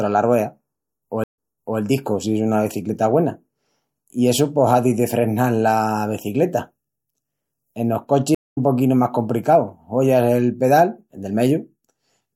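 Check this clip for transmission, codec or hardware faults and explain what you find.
Two stream reconnects break this speech clip. From 1.24 to 1.79 s, a 125 ms dropout is followed by audio resuming 0.43 s earlier, so a short stretch is heard twice. From 8.35 to 8.58 s, a 0.21 s silence resumes roughly 0.2 s later, skipping ahead. Each time the connection failed, the player restarted its decoder mid-stream and the server sent data from a different point. On a spectrogram each gap is a blank vertical band. The first shows the same pattern repeated after the gap, and the second shows an abrupt jump in content. In the waveform, each resumption is a short fade-in from flat line.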